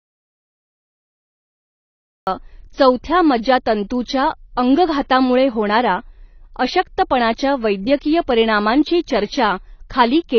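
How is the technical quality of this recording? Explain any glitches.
The recording has two clear problems: a stretch of dead silence at the start and plainly audible compression damage over the whole clip.

From 0 to 2.27 s the clip is silent, with no room tone, and the speech starts mid-flow with "चौथ्या मज्जातंतूच्या अंगघातामुळे होणारा". This is an audio dropout to silence, likely a lost input while the recorder kept writing silence, so whatever came before is gone.

Throughout, the speech sounds dull and smeared, with a fizzy, warbling edge on sibilants and nothing above about 6.6 kHz. That points to AAC compression, likely AAC-LC at a low bitrate around 24 kbps, where the encoder drops high bands and coarsely quantises what remains.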